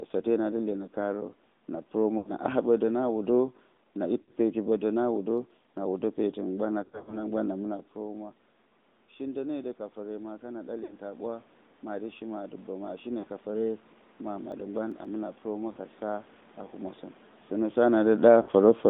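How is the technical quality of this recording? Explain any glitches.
The quality is poor. The recording has been through a narrowband mobile codec, and it has several clusters of lost frames, two bursts of disc ticks and a slow gain rise.

AMR narrowband mobile codec: This runs through the whole clip. The speech passes only between about 200 Hz and 3.7 kHz. The codec models the vocal tract with a few pulses per subframe. At 10.2 kbps the damage is plainly audible: the voice sounds buzzy, thin and synthetic.

Lost AMR speech frames: These occur at 2.18 to 2.32 s (80 ms), 4.22 to 4.31 s (60 ms), 10.84 to 10.96 s (60 ms), 13.20 to 13.25 s (40 ms), 15.72 to 15.79 s (40 ms) and 18.42 to 18.51 s (60 ms). Corrupted frames were discarded. The decoder then repeated the last pitch and filter settings at falling gain. Each loss is heard as a brief warble or dip.

Lost AMR speech frames, scattered: Between 6.84 and 7.32 s, 160 ms of frames drop out in short runs. 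The longest run is 40 ms. The concealment never settles, so the speech flutters and roughens through that stretch instead of fading out.

CD scratch ticks: Four ticks fall between 5.38 and 5.78 s, the longest about 3 ms. Six finer ticks, under a millisecond each, fall between 14.39 and 15.05 s. A disc blemish defeated the error correction on successive turns. The player patched over the bad samples, leaving small regular clicks.

Automatic gain rising: After the input level fell by about 14 dB, from 9.18 to 17.08 s the gain control slowly added about 10 dB to compensate. Speech and room noise swell together over several seconds. The talker's movements near 7.5 and 17.5 s are ordinary level changes at the microphone.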